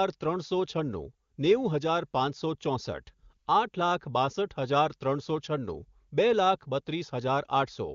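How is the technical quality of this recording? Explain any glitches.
No glitches can be heard in the speech, which comes through the AMR wideband (HD Voice) codec at what sounds like one of its higher rates, with none of the roughness that codec gives at its lowest settings.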